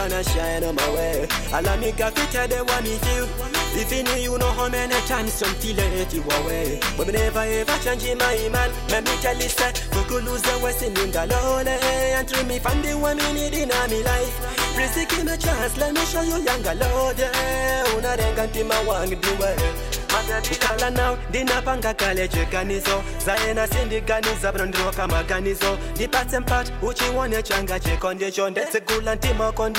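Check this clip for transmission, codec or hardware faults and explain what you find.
I found nothing to report when checking this clip for faults.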